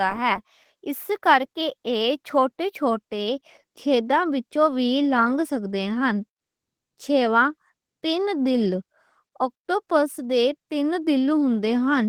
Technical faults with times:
0.00-12.09 Opus voice compression

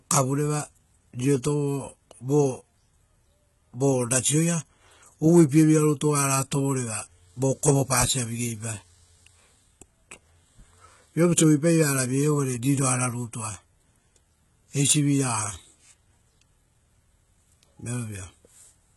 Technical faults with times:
0.00-18.96 HE-AAC compression

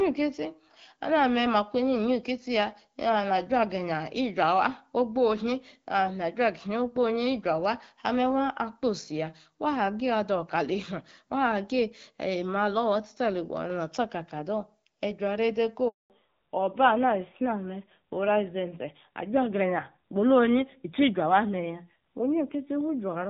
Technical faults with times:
15.88-16.10 handover gap
16.10-23.29 fallback to narrowband

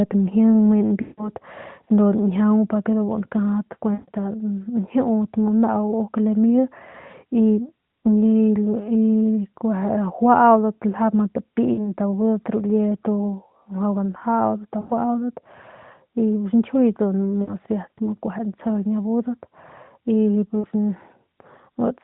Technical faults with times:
1.02-1.29 lost AMR speech frames
3.94-4.09 lost AMR speech frames
11.74-11.93 lost AMR speech frames
14.80-14.92 lost AMR speech frames
17.42-17.55 lost AMR speech frames
20.61-20.66 lost AMR speech frames

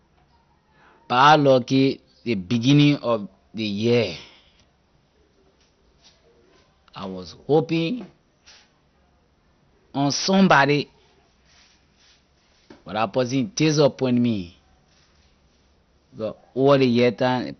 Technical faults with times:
0.00-17.59 MP2 compression

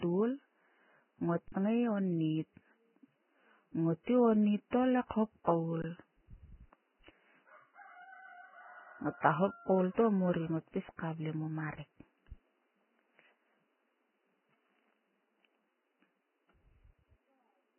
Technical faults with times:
0.00-17.78 Vorbis compression
1.48-1.52 underrun with held sample
5.82 underrun with held sample

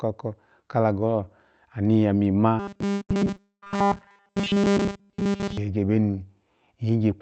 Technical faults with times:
2.59-5.57 robotic sound from repeated short buffers
2.93-3.80 repeated packet loss (robotic sound)

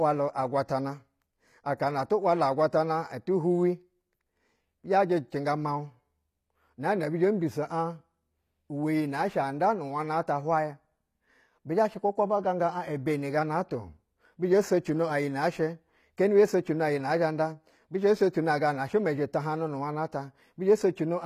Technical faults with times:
0.00-21.26 HE-AAC compression

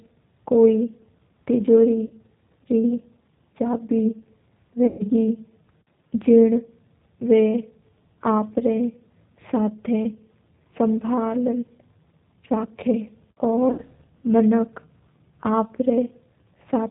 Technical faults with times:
0.00-16.91 G.729 codec
2.07-2.14 VoIP packet loss concealed by the speech codec
4.87-5.03 VoIP packet loss concealed by the speech codec
13.72-13.82 VoIP packet loss concealed by the speech codec

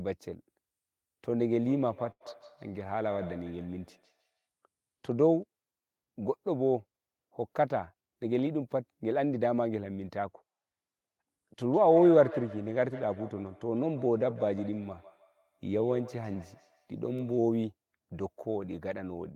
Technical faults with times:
1.61-4.46 feedback echo between two devices
2.11-2.22 short stall from a late packet
7.93-8.75 jitter buffer speed-up
11.69-17.56 feedback echo between two devices

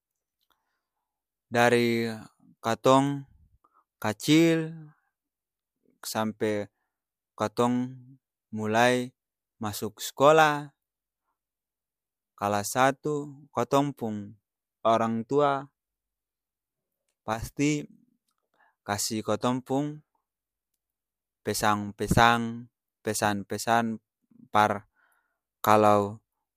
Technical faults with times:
17.34-17.39 one channel drops out

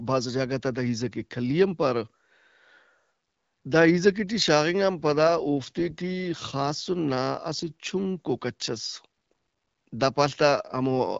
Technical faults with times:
4.98-6.89 AMR rate drop

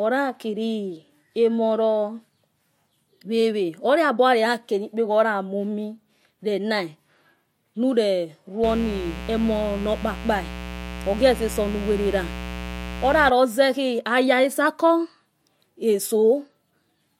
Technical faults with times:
8.63-13.30 mains buzz

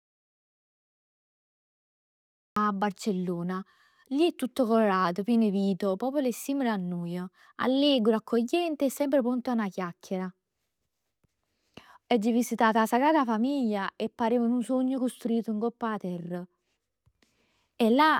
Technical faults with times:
0.00-2.56 audio dropout to silence

